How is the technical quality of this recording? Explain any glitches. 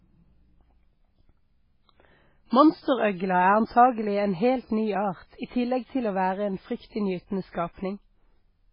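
Quality is poor: heavy MP3 compression damage runs through the entire speech recording. Everything above about 5.3 kHz is gone, so sibilants sound dull and lisped, and the remaining band has a watery, swirling texture with metallic chirps on s sounds and smeared consonant attacks. This is likely a very low-bitrate encode, which fits something around 16 kbps. Short of bits, the encoder chops the treble at a fixed frequency and drops weak frequency lines that flicker on and off between frames. A spectrogram would show a hard horizontal ceiling near 5.3 kHz and speckled, patchy holes below it.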